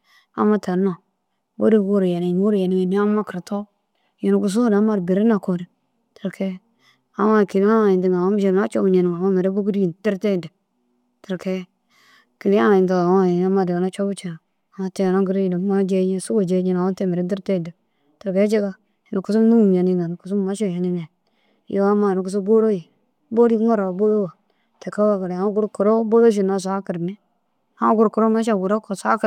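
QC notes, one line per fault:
No faults heard anywhere in the speech.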